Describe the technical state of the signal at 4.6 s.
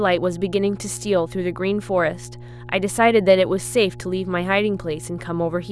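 At 4.6 s the speech carries mains hum, as it does for the whole clip. A steady low tone sits under the speech at 60 Hz, with some low harmonics above it. It sits about 15 dB below the speech. The cause is the power line leaking into the signal path, through a ground loop or a nearby transformer. The hum does not change with the speech.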